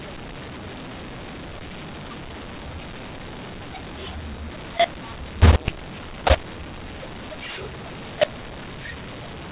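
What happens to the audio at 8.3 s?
At 8.3 s, as throughout, mu-law and A-law are mixed up: mu-law samples read as A-law scramble levels, making speech harsh, with noise lifting pauses into a raised waveform floor.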